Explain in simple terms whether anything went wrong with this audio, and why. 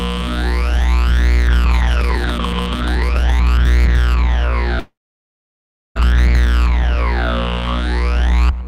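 A long network dropout, likely a stalled connection, loses 4.79 to 5.97 s. The sound fades into a brief buzz, then goes silent for about a second.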